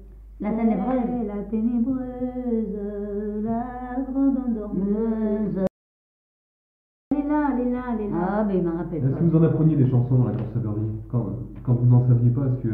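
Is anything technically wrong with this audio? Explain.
Yes. From 5.67 to 7.11 s, an audio dropout to silence: likely a lost input while recording continued, leaving 1.44 s of silence without room tone, unlike a natural pause.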